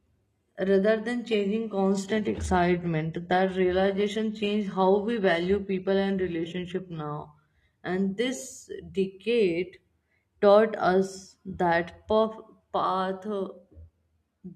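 From 1.27 s to 7.27 s the speech abruptly loses its crisp treble, taking on a thin, synthetic top end and watery codec artefacts, then snaps back with no gap. This is an adaptive stream at a lower bitrate, consistent with switching from 96 kbit/s AAC to 16 kbit/s HE-AAC.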